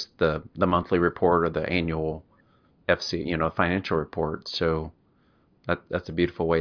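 No technical faults can be heard anywhere in the recording.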